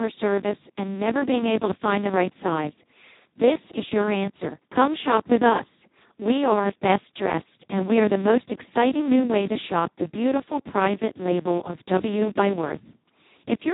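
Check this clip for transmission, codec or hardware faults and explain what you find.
The whole clip is running through the Speex codec at a very low setting, and you can hear it from start to finish. There's nothing above about 3.8 kHz, and the speech comes out hoarse, buzzy and pretty robotic. That's what happens when CELP has almost no bits left to describe the excitation, so it behaves nearly like a vocoder. The damage is heavy, which fits a bitrate somewhere around 2 kbps.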